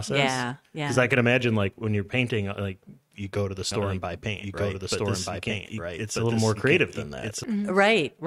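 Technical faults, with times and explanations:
3.72–7.44 s, doubled audio track: a second copy of the speech runs about one and a half seconds behind the first and roughly as loud, so the two overlap into confusing cross-talk. The copy is full-band and dry, with no reverb tail or room colouring, and it cuts in and out abruptly at both ends. That points to a likely cause of the same signal being captured twice, once through a slower path, and mixed back together.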